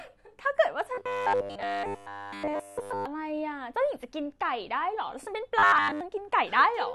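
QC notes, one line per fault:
0.95–3.06 s: robotic sound from repeated short buffers. The speech collapses into a rigid metallic buzz at 100 Hz, likely a 10 ms block replayed almost constantly in place of new audio.
5.59–6.01 s: robotic sound from repeated short buffers. The same 100 Hz buzz returns, likely from a roughly 10 ms buffer looped nearly throughout while real audio is dropped.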